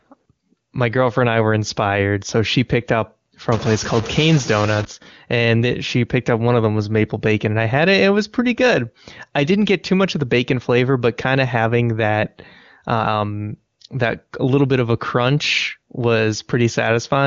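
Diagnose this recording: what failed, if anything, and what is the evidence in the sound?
From 3.52 to 4.85 s the speech turns noisy and distorted. A stuck bit, likely in the converter, shifts about half the samples by its weight.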